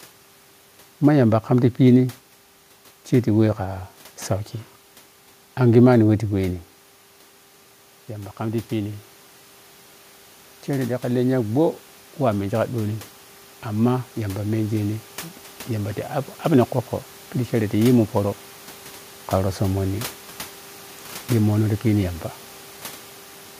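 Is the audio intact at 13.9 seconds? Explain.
No. At 13.9 s the clip is in the middle of an automatic gain rising event that runs from 10.66 s to 16.02 s. The gain control judged the input too quiet and pushed its gain up slowly, by about 7 dB over those five seconds. Because the whole input is scaled, the speech and the room noise behind it swell together, a gradual lift in level rather than a step.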